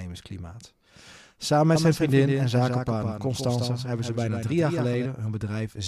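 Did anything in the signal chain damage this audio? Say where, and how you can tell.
Yes, a doubled audio track from 1.76 to 5.06 s, likely a second, slower capture path. A dry, full-band copy trails by about 150 ms at about 5 dB lower, appearing abruptly. The spectrogram shows every onset repeated as a shifted ghost.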